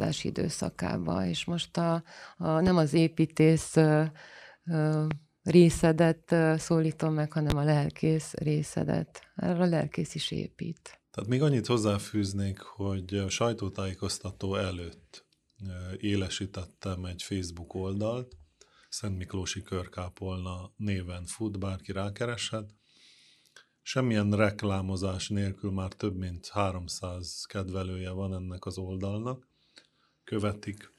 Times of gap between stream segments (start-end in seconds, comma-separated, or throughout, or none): none